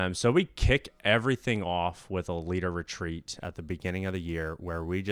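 Speech, with crude rate conversion from 3.39 s, after "with a leader retreat", to the end: a gritty inharmonic fizz, roughly 30 dB down, fitting nearest-sample 48 kHz to 44.1 kHz conversion.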